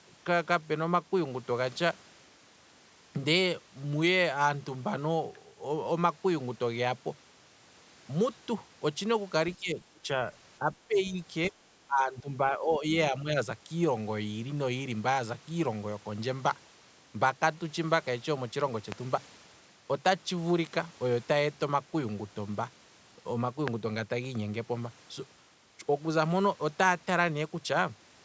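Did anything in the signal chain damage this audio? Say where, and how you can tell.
Yes. Call processing: speech suppressed in double talk at 9.55–10.08, 10.6–10.71, 10.87–11.15, 11.49–11.55, 11.87–12.3, 12.49–12.91 and 13.11–13.35 s. The waveform shows dips of up to about 20 dB, likely from the echo canceller ducking the talker under overlapping speech.

Likely analogue wiring or driver: a loud pop at 18.92 s and another at 23.68 s, peaking about 15 dB and 20 dB above the signal. Each shows as a sharp spike on the waveform and a full-height vertical line on the spectrogram, with the sound carrying on underneath.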